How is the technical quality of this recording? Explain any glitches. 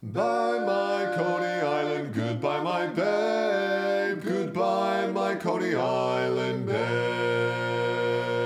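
Nothing here sounds broken: no glitches, dropouts or odd artefacts turn up anywhere in the recording.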